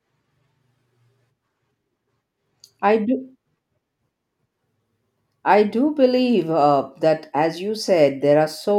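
No technical faults are audible.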